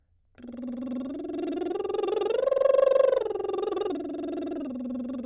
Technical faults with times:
none

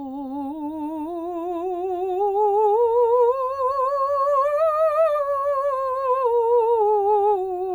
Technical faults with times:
none

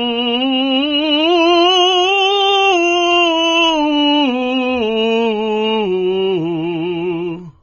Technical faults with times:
0.00-7.62 AAC compression

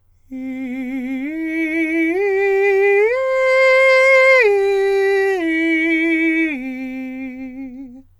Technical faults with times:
none

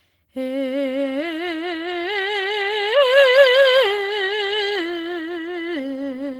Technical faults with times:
0.00-6.39 clock drift between sender and receiver
0.20-6.37 repeated timing corrections

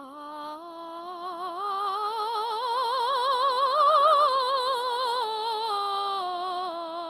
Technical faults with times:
0.00-7.10 Opus compression

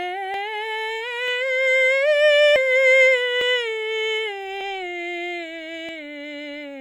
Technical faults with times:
0.34 dropped buffer (overrun)
1.28 dropped buffer (overrun)
2.56 dropped buffer (overrun)
3.41 dropped buffer (overrun)
4.61 dropped buffer (overrun)
5.89 dropped buffer (overrun)

